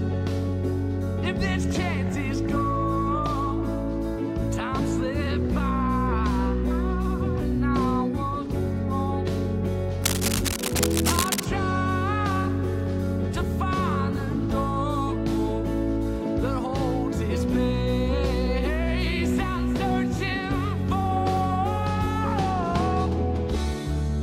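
From 10.03 to 11.46 s, a burst of cable scratch noise rides over the sound, harsh irregular scratching only a few decibels below the signal itself. It is likely from a worn cable or connector being moved. The spectrogram shows ragged broadband vertical streaks there, and the waveform shows dense, uneven spikes.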